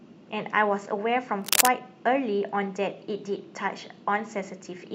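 A worn cable or connector was likely moved, its contact resistance fluctuating, so from 1.42 to 1.68 s cable scratch noise rasps over the speech, a few dB louder.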